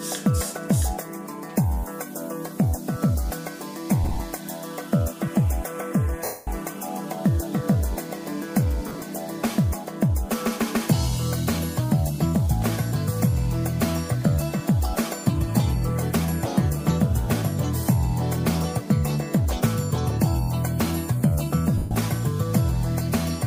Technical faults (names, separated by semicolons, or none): lost LE Audio frames